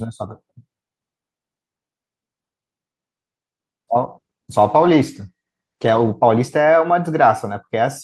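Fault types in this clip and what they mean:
Call bitrate drop: From 3.97 to 6.27 s the speech gets rougher and more watery as the encoder is squeezed onto far fewer bits. It sounds like the rate falls from around 48 kbps to about 17 kbps and stays down for roughly 2.2 s before recovering.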